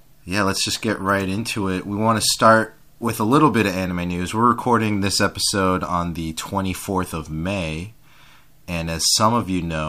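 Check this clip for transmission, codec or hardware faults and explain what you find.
One hardware fault is audible. From 0.74 to 0.82 s the speech breaks into a short, irregular burst of scratchy crackle. This is loose connector crackle: a worn or dirty contact repeatedly making and breaking, chopping the signal and popping on any DC present.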